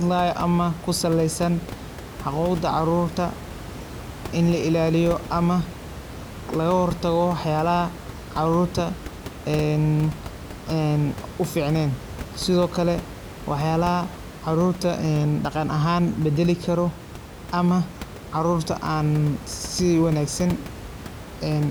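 No technical faults occur at any point in the speech, with only the room's own background noise present at about 14 dB below the speech.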